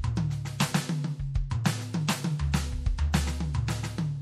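From start to finish, the music carries plainly audible damage that points to MP3 compression as the likely cause. Quiet detail drifts in and out from moment to moment, giving a watery, swirling texture. Attacks lose their edge and smear. An encoder running short of bits drops weak frequency content to save space. The degree of damage fits a low bitrate of around 64 kbps.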